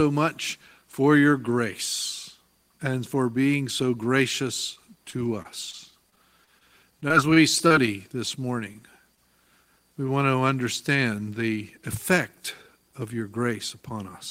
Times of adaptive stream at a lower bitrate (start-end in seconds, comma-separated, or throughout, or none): none